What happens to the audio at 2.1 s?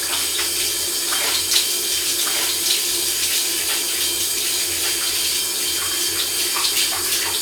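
At 2.1 s, as across the whole clip, a doubled audio track is present. A second, full-band copy of the sound trails the original by about one second at roughly equal level, with no decay or room colour. It is likely a second capture path or misaligned edit layering the audio twice.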